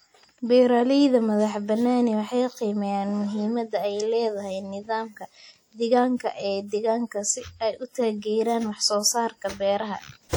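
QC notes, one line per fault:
Throughout: WMA compression, likely. The speech carries a washy, ringing smear with hiss that rises and falls with the signal, which fits long transform blocks at a low bitrate near 48 kbps. The band still reaches about 20.1 kHz, unlike codecs that audibly cut the top.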